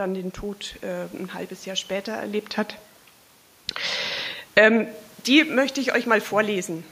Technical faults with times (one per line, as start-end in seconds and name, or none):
4.42-4.72 automatic gain falling
4.63-5.58 automatic gain rising